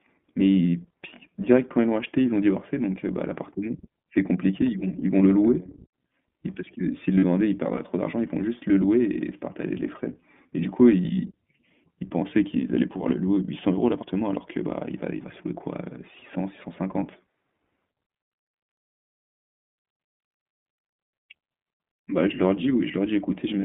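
The speech runs through an iLBC codec for its whole length. This narrowband VoIP coder encodes each 20 ms frame's excitation independently, and the line passes only about 150 Hz to 3.5 kHz, so everything above that band is gone. The coding damage is plainly audible: the speech sounds rough and slightly synthetic, with a muffled, telephone-like top end, which fits a bitrate of around 15.2 kbps. At 4.08 s there is audio missing between chunks. A recorder or processor handling the sound in fixed blocks has likely dropped a short stretch while closing one block and opening the next, then butted the two sides together with no silence in between. What you hear is a sudden skip, with roughly a twentieth of a second of sound cut out and the material on either side abruptly joined. From 7.19 to 7.24 s come lost iLBC frames. The missing packets leave a 40 ms hole, consistent with two dropped 20 ms frames, and the decoder fills it by repeating the last pitch cycle blended with noise. 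That gap comes across as a brief held, slightly buzzy vowel-like sound. Because each iLBC frame decodes on its own, the speech snaps back to normal immediately afterwards.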